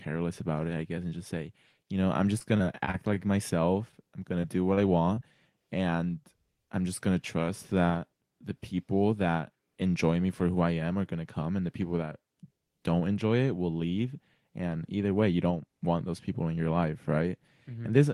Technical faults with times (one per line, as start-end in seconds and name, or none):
2.17-3.20 repeated packet loss (robotic sound)
4.41-4.45 short concealed packet loss
4.75-4.79 short concealed packet loss
5.15-5.19 short concealed packet loss